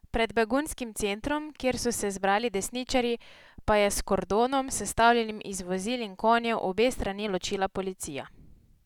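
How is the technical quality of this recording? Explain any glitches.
No glitches can be heard anywhere in this speech recording. There are no faults to explain at any point in the audio.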